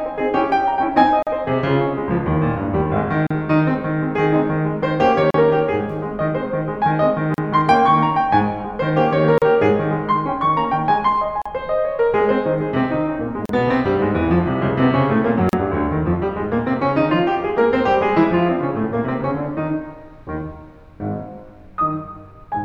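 Brief silences cut into the music every 2 s, at 1.23, 3.27, 5.31, 7.34, 9.38, 11.42, 13.46 and 15.49 s, about 42 ms at first and 38 ms after. The music resumes where it stopped each time. This is a gap at a join of encoded pieces: separately encoded segments were spliced with their encoder padding left in.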